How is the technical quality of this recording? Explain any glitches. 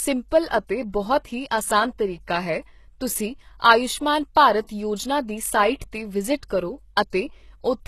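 The speech is plainly degraded by codec damage, with a gritty, artificial top end and three brief smeared attacks.

Throughout, the treble sounds gritty and synthetic, with nothing above 12.3 kHz. This is likely HE-AAC compression, rebuilding highs by band replication at a rate that points to about 16 kbps.

At 4.67, 5.79 and 7.10 s, pre-echo puts a short hiss of 23 to 27 ms before each attack, as block-wide quantisation noise spills ahead of the transient.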